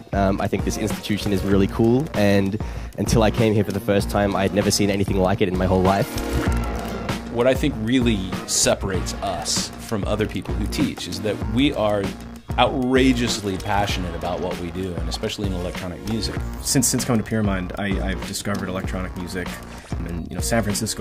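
No faults are audible anywhere in the clip.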